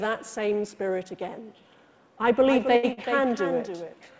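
A doubled audio track begins at 2.45 s and runs to the end: a second, full-band copy about 10 dB quieter trails the original by roughly a third of a second, with no room colour. It starts abruptly, likely because a slower capture path recorded the same sound again.

A short stall from a late packet occurs at 2.76 to 2.85 s and again at 2.93 to 2.99 s. Each time a packet arrived late, the jitter buffer emptied and the receiver stretched the last sound, by 67 ms and then 42 ms, so it is held too long with a slight buzz or dip before continuing without loss. These stalls come through the call path, whose G.722 coding leaves nothing above 8 kHz.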